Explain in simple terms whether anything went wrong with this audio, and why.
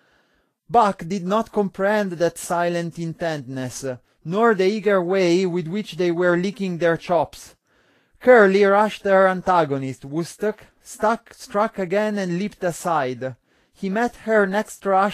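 The speech was likely squeezed too hard by Vorbis compression, which keeps a smooth outline of each sound and stores the fine detail on top only roughly. The result is plainly audible: nothing above 14.2 kHz remains, and the sharper parts of the speech sound hissy and grainy.

Pre-echo appears from 8.20 to 8.23 s. The compressor handles sound in short blocks and spreads its errors evenly across each one, so the noise meant for a sudden loud onset leaks into the quiet just before it. This is heard as a brief hiss ahead of a softened, smeared attack.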